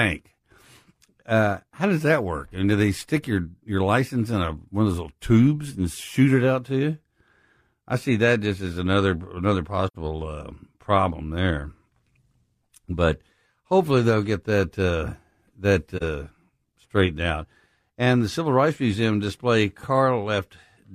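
Soft-edged gaps fade the speech out and back in at 9.87–9.96 s, after "just as another another", and 15.97–16.03 s, after "get that uh that". This is AAC frame loss with muting: missing frames were decoded as silence.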